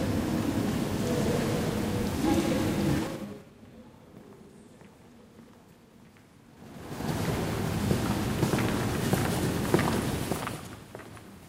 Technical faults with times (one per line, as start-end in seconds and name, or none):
2.99-3.50 zipper noise